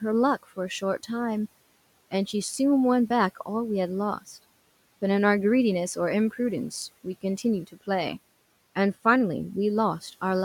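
At 7.67 to 7.88 s the speech is cut by the noise suppressor. The suppressor misjudged a low-level stretch of speech as background and pulled its gain down along with the room noise, by about 18 dB at the deepest point. Around a tenth of a second of sound within that window is affected, so the speech there comes across swallowed and faint. The room noise itself sits about 26 dB below the speech.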